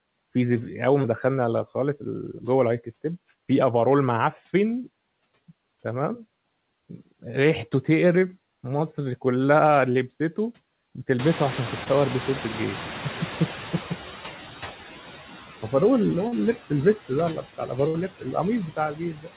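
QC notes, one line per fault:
Throughout: noise suppressor artifacts. The background is pulled down by about 13 dB wherever it reads as steady noise, so it dips between phrases and swells back under the speech. The suppressor works band by band on each short frame, and those gains keep shifting. The speech sits in a narrow band with nothing above 4 kHz, which fits a G.711 telephone-style path.
1.02, 8.20, 9.92, 11.84 and 16.28 s: short concealed packet loss. Each is a brief smear where a scrap of audio went missing, about 20 ms at the first four and 40 ms at 16.28 s. The receiver bridged each hole by stretching the last bit of sound forward, then blended back into the real signal. The patches are so short that they come across as a small wobble rather than a gap, though a quick consonant could drop out.
11.19 to 14.41 s: noise suppressor catching up. Right around 11 s the room noise jumps by about 24 dB, ending up only about 12 dB under the speech. 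At first it comes through with little reduction, because the suppressor's idea of the noise floor is still set to the quieter room. Over roughly 3.2 s the estimate catches up and the noise sinks, to about 9 dB of reduction, so you hear the noise gradually settle down rather than vanish at once.
17.36 to 17.71, 18.19 to 18.35 and 18.68 to 19.30 s: speech cut by the noise suppressor. Bits of the speech get turned down along with the background, by about 10 dB in the first spot and about 15 dB in the other two, for roughly a tenth of a second in the first two and about a third of a second in the last. The suppressor mistakes soft parts for noise, so endings and quiet sounds come out swallowed or faint.
17.88 to 17.96 s: burst of packet loss. About 60 ms of audio is gone here, longer than the single drops earlier. The receiver kept extending the last sound and faded it as the gap went on, so you get a short held buzz or fading hiss. 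Then the audio picks up again further along, and whatever fell in that stretch simply isn't there.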